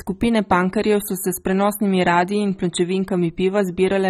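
From start to end the speech carries plainly audible damage that is likely AAC compression at a low rate, consistent with AAC-LC near 24 kbps. The top end is cut off and the upper spectrum sounds patchy, with sibilants turned fizzy and sustained vowels warbling as bands come and go between frames. A plain low-pass filter would only dull the sound; here the missing bands add a restless, swirly texture as well.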